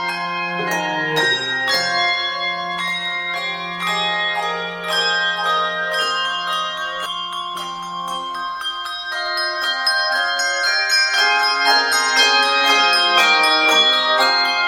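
From 3.34 to 7.06 s the audio has a doubled audio track. A second full-band copy trails the original by about a second, roughly 5 dB quieter. It carries no decay or room colour. It starts and stops abruptly. Likely an out-of-step edit or a slower capture path.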